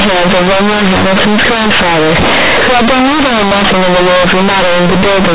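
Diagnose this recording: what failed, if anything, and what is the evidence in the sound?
Sample-format conversion failed: A-law companded audio was read as linear 8-bit with no expansion. Across the whole speech clip, every sign change swings the output through half its range, giving harsh, very loud buzz and pauses as noisy as speech. Ordinary clipping would leave quiet passages clean. The A-law telephone band itself, capped near 4 kHz, sounds intact.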